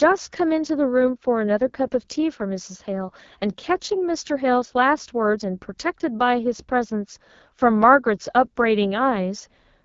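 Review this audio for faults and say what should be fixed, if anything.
AMR wideband (HD Voice) codec damage runs through the whole clip. The speech sounds rough and raspy, which points to one of the two lowest AMR-WB rates, around 8.85 kbit/s. Unlike narrowband AMR, the band still reaches about 7 kHz, with the top above 6.4 kHz filled by shaped noise. To prevent it, carry the call at 12.65 kbit/s or higher.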